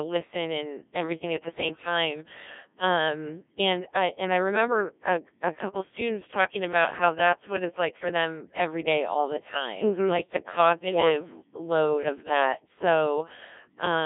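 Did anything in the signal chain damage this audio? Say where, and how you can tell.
Yes: a Codec 2 vocoder stage rebuilt the speech from pitch and envelope parameters, which fits a rate near 1.3 kbit/s, leaving it robotic and buzzy throughout, with nothing above 3.7 kHz.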